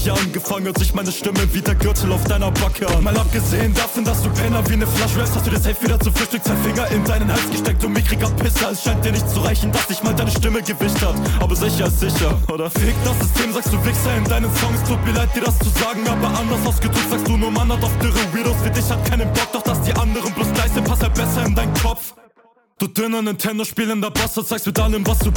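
No technical faults are audible.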